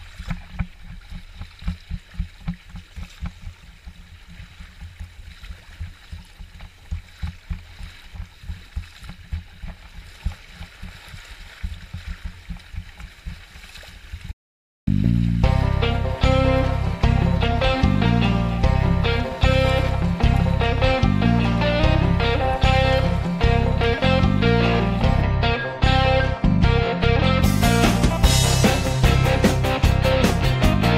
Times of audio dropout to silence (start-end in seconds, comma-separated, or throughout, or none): 14.31-14.87